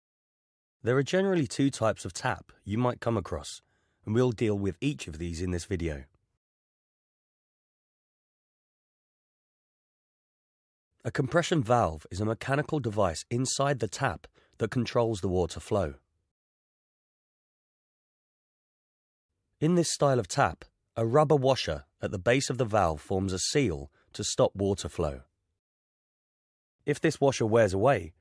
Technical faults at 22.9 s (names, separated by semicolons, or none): none